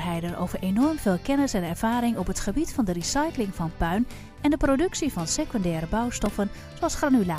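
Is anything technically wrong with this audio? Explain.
Yes. A repeated buffer occurs at 6.26 s. New audio arrived late, so the output replayed its last block of about 1.45 ms, which fits a 64-sample buffer, three extra times. The hard joins between these tiny repeats produce a brief click-like buzz, and a few milliseconds of sound are lost.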